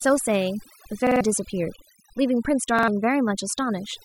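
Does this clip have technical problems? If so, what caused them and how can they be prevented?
Yes. Throughout the clip, the background has dropped and breaks up into twinkling, warbling specks. This is overdone noise removal. The reduction was set so strongly that any frequency band close to its noise estimate was pulled far down or shut off, taking the quieter parts of the speech with it and leaving isolated bands flickering. Using a gentler reduction setting, or recording in a quieter space so less removal is needed, would prevent this.

Twice the sound stutters with hard joins, a repeated buffer. From 1.07 to 1.21 s, one short slice of about 46 ms plays three extra times. From 2.79 to 2.88 s, a slice of the same length repeats twice more. That length fits a 2048-sample buffer. Fresh audio did not arrive in time, so the device replayed the last block, and around 150 ms and 100 ms of real speech are missing at the two spots. 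A larger buffer or a less loaded playback or recording system would prevent this.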